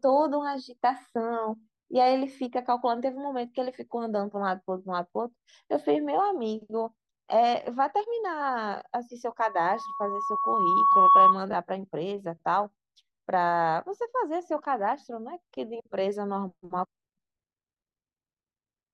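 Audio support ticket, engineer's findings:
Loudspeaker feedback squeal, 9.40 to 11.38 s. Single 1.1 kHz tone swelling over about two seconds to roughly 10 dB above the speech. Mic picking up its own PA loudspeaker; loop gain above unity at that frequency, self-sustaining until the loop breaks.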